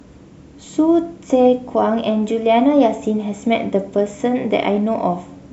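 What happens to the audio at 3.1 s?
Nothing goes wrong at 3.1 s; the speech carries on intact through that moment, with no dropout, click or distortion to be heard.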